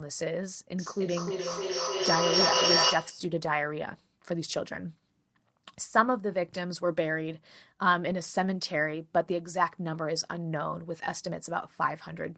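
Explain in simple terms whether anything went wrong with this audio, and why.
From 0.79 to 3.35 s there is a feedback echo between two devices. Two devices in the same room were on the call, and one played out what the other's microphone had sent. That microphone heard it again, and its echo canceller couldn't remove sound coming from a different device. So each bit of speech comes back about every third of a second, thinner and more ringing each time. Here the loop is strong enough that the repeats grow louder than the speech itself instead of fading away.

At 8.05 to 8.11 s you can hear a lost packet rebuilt from error correction. A couple of small chunks of the audio seem to have gone missing on the network. The chunk arriving next carried a rough backup copy, and the receiver used it to fill the 40 ms gap. Nothing drops out, but that moment sounds briefly rougher and noisier than the audio around it.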